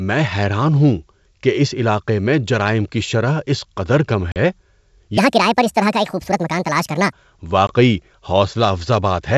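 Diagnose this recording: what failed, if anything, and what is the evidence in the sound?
Packet loss on the ADPCM call, at 4.32 to 4.37 s just after "شرح اس قدر کم" and again at 7.67 to 7.74 s: this is a network fault. Hard-edged silent gaps of 40 ms and 20 ms, consistent with about two packets and then one, leave the decoder's predictor and step size out of step, so speech resumes briefly misjudged before settling.

A section at the wrong speed runs from 5.18 to 7.12 s, at the playback or editing stage. The audio runs 1.63 times too fast, with pitch raised by roughly ten semitones, so it sounds high and hurried. The likely cause is that the section was fitted to the wrong clock.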